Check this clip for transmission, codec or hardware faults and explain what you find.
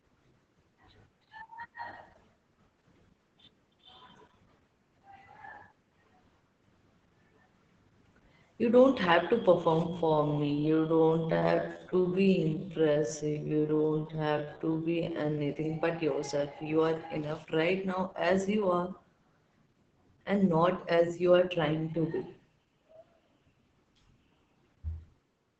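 Two faults here: Opus voice compression across the whole clip, and a slowed, time-stretched section in the middle.

The Opus voice compression is audible from start to finish and the damage is heavy. It sounds like the SILK speech coder running in wideband at a very low rate, which fits something around 10 kbps. At that rate the coder can only describe the vocal excitation coarsely, so the speech comes out muffled, a bit hoarse and faintly robotic. There's also nothing above 8 kHz.

The time-stretched section runs from 9.85 s to 15.49 s, starting right after "don't have to" and ending just before "but yourself". The pace drops to 0.623 times normal speed while the pitch stays where it was. That's most likely software stretching the audio to fill a length by repeating short slices of it, and those repeats are why the slowed stretch drags, with the pace changing abruptly at each end.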